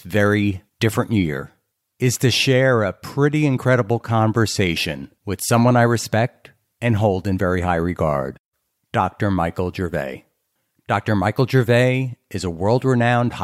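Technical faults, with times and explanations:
No technical faults can be heard anywhere in the speech recording.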